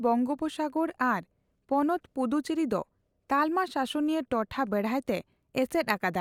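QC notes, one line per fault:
No technical faults can be heard anywhere in the speech signal.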